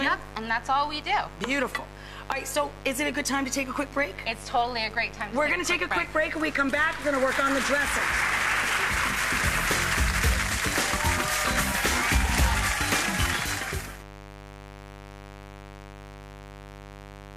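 Switching spikes from a dimmer, rectifier or missing shield leak in at 50 Hz, causing mains buzz throughout: a steady raspy buzz about 15 dB below the sound.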